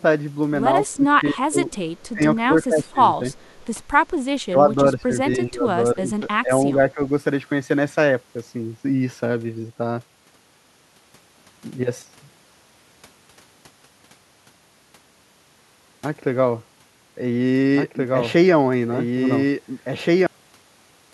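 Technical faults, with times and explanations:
0.95–1.67 s, 2.14–2.22 s, 2.46–2.99 s, 4.49–5.14 s, 5.37–5.66 s and 5.94–7.1 s, speech suppressed in double talk: an echo canceller likely mistook this talker for loudspeaker echo while both sides spoke and turned everything down. The speech dips by about 15 dB, about 20 dB at 4.49 s.
1.72–2.09 s and 3.32–3.6 s, echo leak: a far-end echo canceller likely let part of its loudspeaker pickup through and sent it back. A faint copy of the speech, about 30 dB and then about 35 dB down, trails the original by 284 ms.
17.75–20.27 s, doubled audio track: the same audio is likely mixed in twice, with a second path running late. A full-band copy about as loud as the original follows 1.5 s behind, with no decay or room colour, and it starts and stops abruptly.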